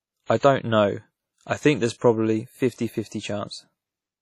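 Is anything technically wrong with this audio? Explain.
Yes. Throughout the speech, the audio likely went through WMA compression at a low bitrate, around 32 kbps judging by the heavy damage. Its long transform blocks smear quantisation noise over tens of milliseconds and drop weak spectral detail, leaving ringing, washy speech with hiss that breathes with the signal and nothing above 19 kHz.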